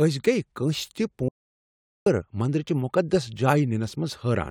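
The input signal was likely lost between 1.29 and 2.06 s, through a dropped link, a disconnected device or a stray mute, while recording carried on writing silence. This audio dropout to silence cuts the speech off abruptly, leaving 0.78 s of dead quiet with no room tone before "مندر چِہ" resumes.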